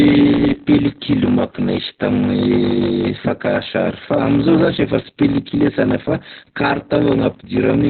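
Throughout the speech, a block size mismatch (padded) leaves a short silent gap in every block. That gives a steady 46.9 Hz buzz and slows delivery to 0.861 times normal speed while keeping the timbre, which is how it differs from a simple slow playback. It fits a 1024-sample read buffer.

Opus voice compression, also present throughout, cuts everything above 4.4 kHz and leaves the voice muffled, hoarse and slightly robotic. This narrowband SILK damage fits a bitrate around 8 kbps, unlike a plain low-pass filter, which would not add coarse, buzzy excitation.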